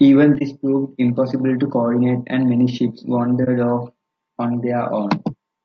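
The whole clip has the rough, grainy speech of low-delay AAC compression, likely AAC-ELD at a bitrate that sounds like about 32 kbps. Its short frames resolve pitch harmonics poorly, so noise fills the gaps between them and the top band sounds thin and synthetic.

At 0.38 s, just before "proved impossible to coordinate", there's AAC frame loss with muting: roughly 30 ms of audio was dropped and the decoder zeroed it, leaving a brief dip. It happens again at 3.44 s, between "coordinate and many ships" and "off on".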